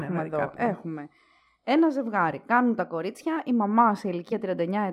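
A speech recording with two faults. From 2.80 to 3.37 s, speed and pitch rise together by about 5.9% and 99 cents, roughly a semitone, then snap back, likely a drift correction step. At 4.31 s, damaged data in the compressed stream makes the decoder lose sync, producing a brief blip.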